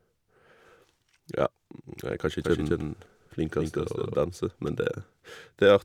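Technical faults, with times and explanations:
2.44–4.14 s, doubled audio track: right after "jeg er kanskje" the speech gains a second full-band copy about 200 ms behind and about 5 dB quieter. It has no decay or room colouring and starts and stops abruptly, so it sounds like a stutter rather than an echo. The likely cause is a slower second capture path or an edit holding two out-of-step copies. A spectrogram shows each syllable with a fainter twin shifted right, and the waveform repeats every envelope at that fixed offset.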